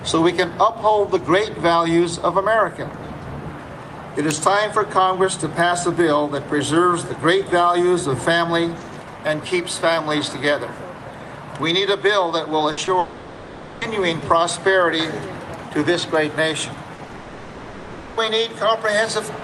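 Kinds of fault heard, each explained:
Burst of packet loss: At 12.71 to 12.79 s, about 60 ms of audio is missing, and the last sound carries on in its place before fading. A voiced sound becomes a brief held buzz, other material a dwindling hiss, and the audio resumes a little further on. It is longer than the short concealed loss, but it is a single hole, with none of the stop-start pattern of the robotic stretch.
Short concealed packet loss: Around 12.85 to 12.89 s, only about 20 ms goes missing. The receiver patches it by extending the preceding sound and blending back into the real signal, so it comes across as a quick smear or wobble rather than a held buzz. A brief consonant-like detail can drop out. Its shortness sets it apart from the burst just before it, since the patch never has time to become an audible sustained tone.
Long network dropout: From 12.99 to 13.83 s (about 0.82 s) and again from 17.15 to 18.19 s (about 1.02 s), the sound freezes into a stretched-out continuation of what came before. 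It fades but never drops to true silence, and the audio returns with a section absent. The cause is likely a network outage during which nothing arrived. What distinguishes it is duration: these fills last close to a second, far beyond the tens of milliseconds of the other losses.
Repeated packet loss (robotic sound): Between 16.95 and 17.15 s, four separate gaps, the longest about 40 ms, chop the audio so that half of that fifth of a second is patched rather than real. The rapid alternation of fragments and fills gives a choppy texture. Unlike a single burst, the holes recur in quick succession. This stretch leads straight into the second long dropout.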